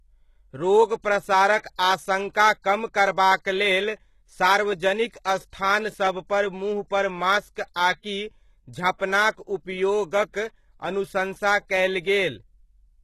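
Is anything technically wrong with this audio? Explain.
Yes. The speech throughout sounds like heavy HE-AAC compression, likely at a very low bitrate around 16 kbps. Nothing remains above about 12.3 kHz. The treble is rebuilt from copied lower bands rather than coded directly. Its harmonics fail to line up, so s sounds turn gritty and metallic.

Pre-echo occurs at 1.76–1.79 s, 8.98–9.00 s and 10.32–10.35 s. Each time, block-wide quantisation noise spills ahead of a sharp attack. A short hiss of about 25 to 30 ms leads in, and the onset sounds softened and smeared.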